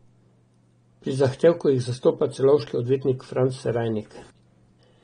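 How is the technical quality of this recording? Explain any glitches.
Quality is limited by AAC compression throughout. The speech sounds dull and smeared, with fizzy sibilants and nothing above 9.7 kHz. That's likely AAC-LC coding at a low bitrate, which lowers the cut-off and coarsely quantises the spectrum.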